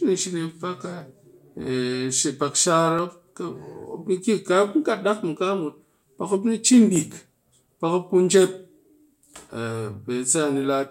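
From 1.01 s to 8.94 s a click recurs every 1.98 s, about five in all. These are likely clock drift buffer slips: two clocks differing by around 200 ppm, with each slip dropping or repeating some 15 samples. Spectrograms show thin vertical broadband lines, and waveforms show abrupt steps.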